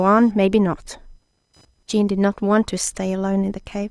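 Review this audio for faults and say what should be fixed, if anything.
Computer activity noise runs throughout the speech, a faint buzzing whine pulsing at around 1 kHz, roughly 40 dB below the speech. Processor, graphics or mouse load shifts the shared ground under the audio circuit, so the noise tracks computer activity rather than the sound. Fix it by moving the interface to an isolated or powered hub, or by adding a ground-loop isolator or external USB audio interface.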